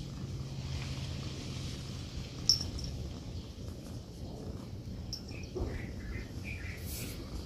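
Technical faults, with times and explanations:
No technical faults can be heard anywhere in the clip.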